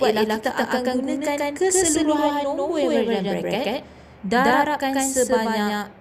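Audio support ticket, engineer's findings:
Doubled audio track, whole clip. A second full-band copy about 150 ms behind, at roughly equal level. Likely a second capture path or misaligned edit mixing the same audio twice. Unlike echo or reverb: one clean repeat, no decay tail, no added room colour.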